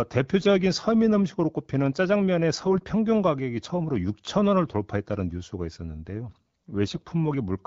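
AMR bit errors at 0.40–0.50 s, 2.55–2.81 s and 6.86–7.05 s: a few percent of weakly protected bits flip, misplacing excitation pulses and skewing gain and spectrum values, so speech turns briefly hoarse and gargly.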